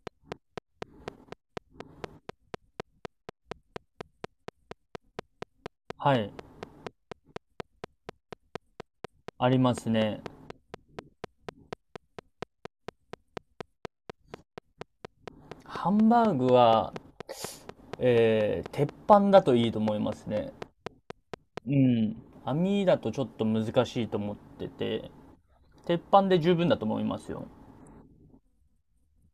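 Right from 0.07 s a train of clicks runs under the speech until 21.58 s, about a hundred of them at a steady 4.1 per second. Each one has much the same sharp shape and pokes out a little above the speech, so you hear a regular ticking that carries straight through the pauses too. It's likely interference from nearby equipment or a faulty connection or power supply, injecting the same pulse on a fixed cycle.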